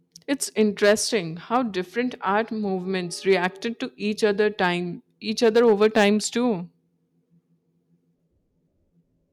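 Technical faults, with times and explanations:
0.32–1.16 s, 1.55–1.57 s, 3.30–3.46 s (just before "to each"), 4.24–4.67 s (just after "to each") and 5.44–6.09 s, hard clipping: the speech turns harsh and crackly on its peaks, fuzziest in the first and last spans. Peaks overran a stage's ceiling by about 5, 2, 3, 1 and 6 dB and were sliced flat, and those flat tops add high harmonics.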